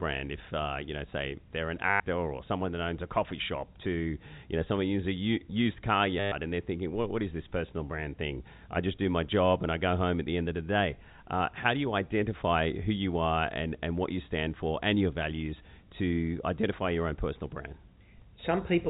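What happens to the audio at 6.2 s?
A brief robotic stutter breaks the speech from 6.2 to 6.32 s, right after "uses a used car" and before "and they're thinking what", with a buzzy repeat lasting 120 ms. This is packet loss with the last packet repeated: the receiver kept replaying its final good packet until fresh audio arrived. The buzz sounds near 100 Hz, which fits 10 ms packets.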